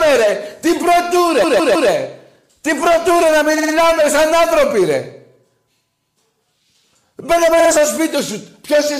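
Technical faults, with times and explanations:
1.43–1.90 s, 3.57–3.73 s, 7.59–7.70 s: repeated frames. A 157 ms block replays three extra times, then 52 ms blocks three and two extra times, causing stutters. Waveform shows identical copied segments; spectrogram shows the same pattern repeating.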